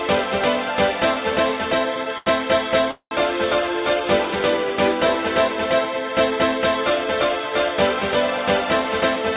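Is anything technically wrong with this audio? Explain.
Yes, there are three faults, all from delivery problems on a call path whose band stops at 4 kHz, which points to a G.711 mu-law stream at 64 kbps.

Short stall from a late packet, 2.18 to 2.28 s: a packet missed its playout time and the jitter buffer emptied. The receiver held the last sound for 84 ms until the packet turned up, then carried on from the same point. Nothing is lost, but that moment is stretched, with a faint buzz or a small dip, and everything after runs 84 ms later.

Call audio freeze, 2.91 to 3.13 s: the sound halts for 202 ms. The receiver extends the last sound as a fading buzz, then drops to about 90 ms of silence before the audio resumes where it stopped. Little or nothing is missing; a gap has been inserted, pushing the rest later by another 202 ms. The likely cause is packets held up in transit, draining the jitter buffer.

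Jitter buffer speed-up, 8.65 to 9.34 s: after the delays, the buffer held more audio than its target. To shrink the backlog, the receiver cut out many short pitch-period-sized pieces in a row, a few tens of milliseconds in total. The audio plays about 5% faster at unchanged pitch, so this last stretch sounds slightly hurried.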